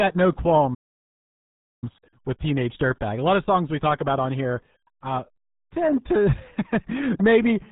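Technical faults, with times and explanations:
Throughout: RealAudio 14.4 codec. The speech sounds muffled and gargly, with a watery, bubbling roughness on every syllable and no brightness at all. Nothing above about 4 kHz survives, so sibilants and consonant edges are dulled. This is the sound of a very low-rate speech codec built for dial-up modems. The heavy damage and narrow band fit a stream squeezed to around 8 kbit/s, where only the coarse shape of the voice can be kept.
0.74–1.84 s: Playback stall. The audio stops dead in mid-flow and leaves about 1.08 s of silence before it picks up again. The break is abrupt rather than faded, which is typical of output that simply halts. The likely cause is that the player ran short of data or its playback thread was held up, so nothing reached the output until it recovered and carried on.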